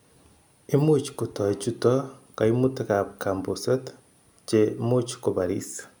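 No technical faults can be heard anywhere in the speech recording; the signal stays continuous and intact throughout.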